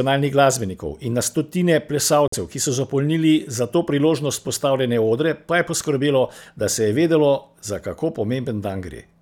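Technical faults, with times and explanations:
2.28–2.34 s, corrupt frame muted: damaged bits in the compressed stream made the decoder reject its frames, and the player put silence in their place. The speech drops abruptly into a 66 ms hole, which fits three consecutive frames of about 22 ms each, and then resumes with its timing intact.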